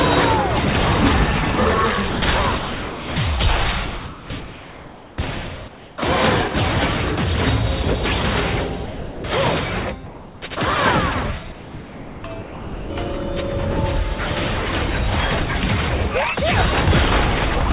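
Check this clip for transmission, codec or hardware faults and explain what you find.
Three kinds of fault are audible, all pointing to a voice detector switching transmission off, within a band that stops at 4 kHz, which fits a narrowband telephone codec such as G.711.

Sound dropped by the voice detector, at 2.10–2.22 s, 2.58–3.16 s, 3.86–4.30 s and 8.86–9.24 s: the sound gives way to steady noise, likely because the detector judged it background. On a spectrogram the signal's structure turns into even, featureless noise.

Comfort noise in place of the background, at 3.86–5.18 s, 5.68–5.98 s and 10.06–10.42 s: during pauses the real background becomes smoother synthetic noise, about 2 dB and about 1 dB quieter in the later two. The waveform envelope flattens.

Sound chopped by the voice detector, 11.52–12.90 s: sending toggled repeatedly, leaving holes filled with noise. The waveform shows the sound breaking into gaps of flat noise over this stretch.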